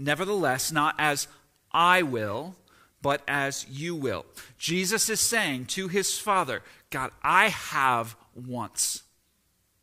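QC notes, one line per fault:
No faults heard anywhere in this speech recording.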